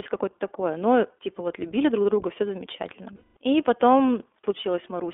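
Throughout, the speech passes through the iLBC codec. Its independently coded 20 ms frames, at a rate that points to 15.2 kbps, leave a band of 0.3 to 3.5 kHz and a plainly rough, synthetic edge. From 3.16 to 3.37 s, right after "друг друга все замечательно", lost iLBC frames (about 200 ms, consistent with ten 20 ms frames) make the decoder repeat the last pitch cycle with noise. This gives a held, buzzy vowel before clean recovery.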